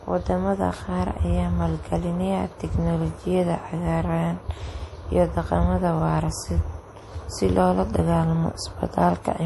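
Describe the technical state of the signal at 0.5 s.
Likely MP3 compression at 0.5 s, as across the whole clip: short of bits, the encoder has cut everything above 11.5 kHz and zeroes weak frequency lines frame by frame, so the speech sounds plainly watery and swirly, which fits about 48 kbps.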